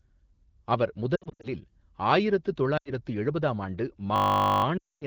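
From 1.15 to 1.48 s, the speech breaks up in brief dips and warbles. These are lost AMR speech frames: corrupted frames were replaced by repeating the last good pitch and vocal-tract settings at falling gain. The gaps add up to about 180 ms, with runs no longer than 60 ms. From 2.77 to 2.92 s, just before "எழுபதாம் ஆண்டு", about 80 ms of frames is lost.

Just after "எழுபதாம் ஆண்டு", from 4.16 to 4.64 s, a system hang loop sets in. The system stalled while the sound hardware kept replaying one 20 ms slice. It repeats 24 times at 50 Hz and is heard as a steady buzz.

From 4.78 to 5.05 s, lost frames return for about 240 ms. Through all of this, the AMR wideband (HD Voice) codec at 12.65 kbit/s adds only light coding colour.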